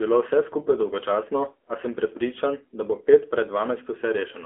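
Speech squeezed through the AMR narrowband mobile codec the whole way through. It's band-limited to roughly 250 Hz to 3.4 kHz, nothing above 4 kHz, and the voice has a plainly buzzy, synthetic edge that fits a low mode around 7.4 kbps.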